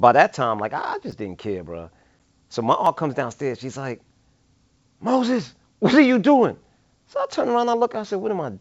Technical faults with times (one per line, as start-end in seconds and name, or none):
1.11 repeated buffer
2.19 packet loss on an ADPCM call
2.85 repeated buffer